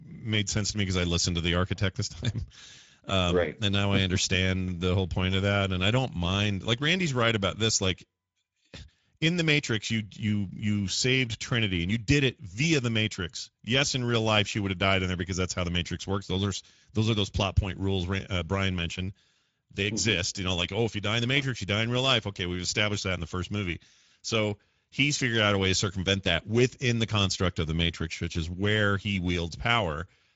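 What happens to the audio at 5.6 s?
At 5.6 s the speech carries Speex codec damage, present across the whole clip. This CELP coder models the excitation with too few bits, so the speech turns plainly hoarse and grainy, which fits a bitrate near 17 kbps. Nothing is left above 7.7 kHz.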